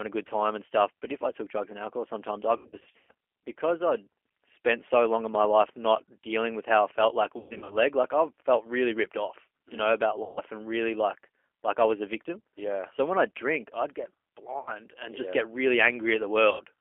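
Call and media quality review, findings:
Thin, boxy, slightly rough and synthetic throughout, with no content above 3.4 kHz or below 300 Hz. G.729 codec at 8 kbit/s, likely the G.729A variant. Audio is rebuilt from a vocal tract filter, pitch predictor and sparse pulses per 10 ms frame, so detail is replaced by a rough, synthetic, plainly audible coarseness on a 300 Hz to 3.4 kHz line band.

Speech smears into buzzy tones or coloured noise that fades, then sounds weak or distorted briefly after recovery. VoIP packet loss concealed by the speech codec: the decoder extrapolates last pitch and filter, with decaying gain.
2.57–3.11 s, between "and alcohol sometimes I" and "because I'd spent so": 360 ms lost over 520 ms, longest gap 120 ms.
7.38–7.78 s: 240 ms over 320 ms, longest 120 ms.
10.23–10.42 s, between "you mm know about" and "and really like like": 140 ms.
14.59–14.71 s, between "I drink I'd get" and "and just yeah get": 80 ms.
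16.51–16.62 s: 80 ms.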